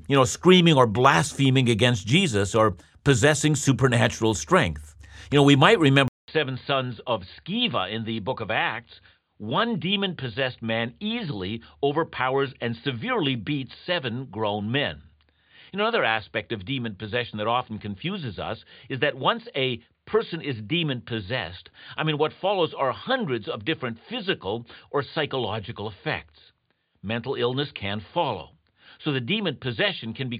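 Input switched to a poorer device at 6.08 s, after "know we might": a 200 ms gap, then duller, slightly quieter speech with nothing above 4.7 kHz, likely another microphone.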